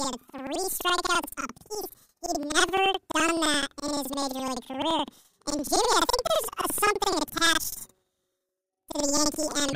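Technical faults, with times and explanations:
Throughout, planar audio read as interleaved: the speech sits an octave high with a flutter at 11.7 Hz. Each 85 ms stretch, which fits a 4096-sample block, plays twice at double speed, left half then right. Unlike a sample-rate error, the pace stays normal.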